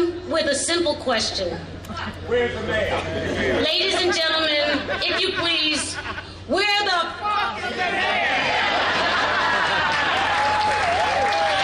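There's hard clipping running right through the audio: the level is pushed about 3 dB past what some stage can pass, so the loudest peaks get sliced flat. It only touches a tiny fraction of samples, so you hear crackle on the peaks rather than constant fuzz.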